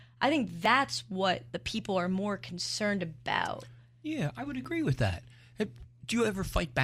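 Overlap between stream segments, with neighbouring chunks about 4 s long, causes the player to trim audio it wrongly treats as duplicated at each join in this speech clip. A few milliseconds of real signal are discarded and the waveform jumps, giving tiny skips at 0.65 s, between "I think" and "what the people are", and at 4.65 s, between "I would" and "with that". The roughly 4-second spacing matches the segment length.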